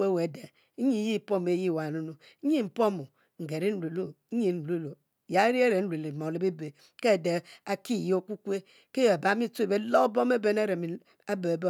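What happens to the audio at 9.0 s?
Nothing goes wrong at 9.0 s: the speech there plays through intact, with no dropout, click, distortion or other fault.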